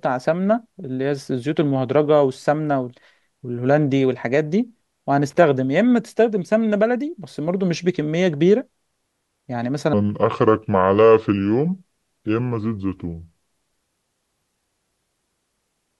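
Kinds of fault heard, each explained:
Loose connector crackle: A worn or dirty contact making and breaking as it shifts chops the signal and throws in pops. Here it shows as a brief irregular burst of crackle from 5.30 to 5.36 s, cutting across the speech.
Section at the wrong speed: From 9.93 s to the end, the speech plays at 0.73 times its recorded speed, so it sounds slower and roughly five semitones deeper. The likely cause is the section being fitted to the wrong clock during editing or playback.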